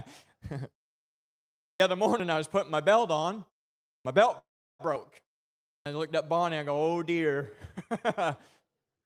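Speech with three kinds of fault. Three phrases begin abruptly out of silence, their opening sounds shaved off: at 1.71 s, after a pause of about 1.05 s, roughly 90 ms is lost; at 3.97 s, after "putting my belt on" and a 0.54 s pause, about 84 ms vanishes from the start of "my belt"; and at 5.76 s, after a 0.58 s pause, about 100 ms disappears ahead of "I looked up". This is a clipped start after a pause: the output device drops into a low-power state during silence and has to wake and lock again, so the first fraction of each new sound is swallowed. At 2.20 s and again at 4.96 s there is a small forward jump in the sound, with no gap, skipping roughly 30 ms and 20 ms respectively. The likely cause is a dropped buffer (overrun): the samples were overwritten before the software collected them, and the two sides were spliced directly together. Just after "my belt", from 4.38 to 4.81 s, the sound stalls, a brief smeared continuation decaying into about 360 ms of silence, before picking up exactly where it stopped. 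That is a call audio freeze, likely from delayed packets draining the jitter buffer. About 411 ms is inserted and nothing is lost.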